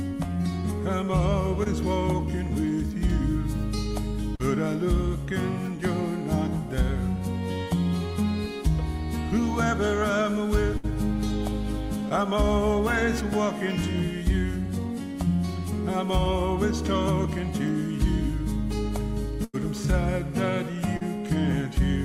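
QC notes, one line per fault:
1.63 to 1.67 s, short concealed packet loss: About 20 ms never arrived in time. The receiver continued the preceding sound, leaving a brief smear or wobble.
4.35 to 4.41 s, short concealed packet loss: About 40 ms went missing. The gap was filled by extending the last sound and blending back, so it wobbles briefly.
10.77 to 10.85 s, burst of packet loss: About 60 ms was lost in a row. The last sound is held and fades, then the audio jumps ahead.
12.09 to 12.12 s, short concealed packet loss: About 20 ms went missing and was patched from the preceding sound. It comes through as a very short smear.
19.44 to 19.55 s, burst of packet loss: About 100 ms was lost. A held buzz or fading hiss replaces it, and that stretch of sound is gone.
20.97 to 21.03 s, short concealed packet loss: About 40 ms was concealed by continuing the last sound. It is heard as a brief wobble before the audio resumes.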